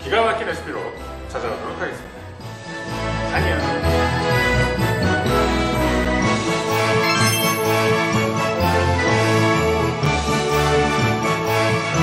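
Three short silent holes cut into the sound at 2.04, 6.05 and 10.06 s, each about 6.5 ms long, a gap between chunks. The audio was delivered in 4.0 s pieces, and a few milliseconds of silence were inserted at each join, likely from codec padding or a player starting each piece late. Unlike packet-loss dropouts, nothing is missing: the sound resumes where it stopped, and the holes fall at exactly regular spacing.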